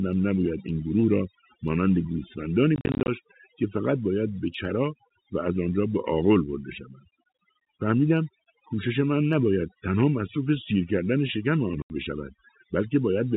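Overdone noise removal runs through the whole speech clip. The reduction is set so hard that frequency bands near the noise estimate are pulled down or removed, taking quiet parts of the voice with them. The background drops and breaks up into twinkling specks, and the voice sits within the 4 kHz telephone band of the G.711 line.

Packet loss filled with silence appears from 2.76 to 3.08 s. About 180 ms of sound is missing, scattered across 320 ms in short holes no longer than 40 ms, each with hard edges. The hole lengths fit 10 ms packets. A second single gap of 80 ms at 11.82 to 11.90 s cuts the speech cleanly.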